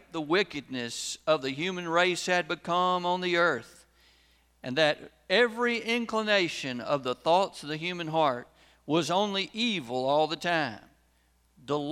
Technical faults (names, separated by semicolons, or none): none